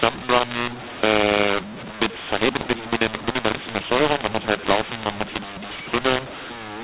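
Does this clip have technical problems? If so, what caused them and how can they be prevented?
Yes. Throughout the whole speech clip, mu-law and A-law are mixed up: the G.711 stream was encoded with mu-law but decoded as A-law, so every 8-bit code maps to the wrong level. Loud and soft parts come out scrambled, speech sounds harsh and distorted, and pauses fill with noise instead of falling silent. To prevent it, make sure the decoder uses the same companding law as the encoder, with both ends set explicitly to mu-law.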